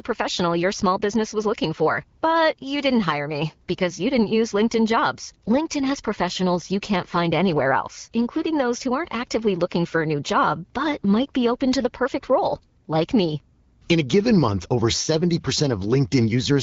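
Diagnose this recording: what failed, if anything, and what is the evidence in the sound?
Nothing in this speech recording has failed; what you're hearing is just the AMR wideband (HD Voice) codec running at 12.65 kbit/s, which leaves only light traces of its coding on the sound.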